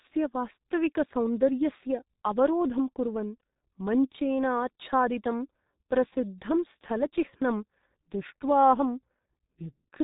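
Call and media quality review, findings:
Speech, full length: G.723.1 codec damage, heavy. Muffled, hoarse, consonants smeared into each other. Nothing above about 3.8 kHz, so sibilants and fricatives lose their edge. Probable component: a low-rate telephony leg encoding at roughly 6.3 kbit/s. Mechanism: 30 ms frames with a slowly updated vocal-tract model, so fast onsets and transitions get averaged across each frame, leaving that rough, boxy texture.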